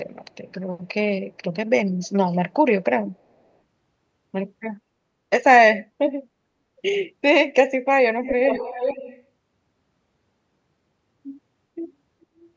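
At 2.03 s a brief scrap of delayed sound appears for about 60 ms, very faint and well under the main speech. From 8.23 to 9.23 s a full second of echo leak returns, now nearly as loud as the speech. Both copies trail by 412 ms, which points to a far-end loudspeaker being picked up by its microphone, with the echo canceller likely failing to subtract it. Above the call processing's 8 kHz ceiling, nothing is present.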